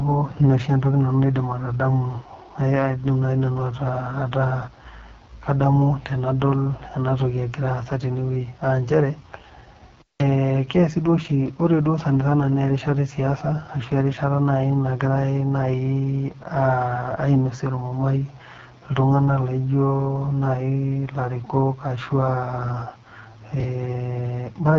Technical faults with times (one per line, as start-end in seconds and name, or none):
0.00-24.79 AMR wideband (HD Voice) codec
10.00-10.22 intermittent contact
23.60-23.64 chunks out of order